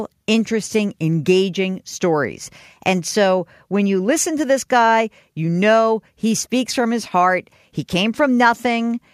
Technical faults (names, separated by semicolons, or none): none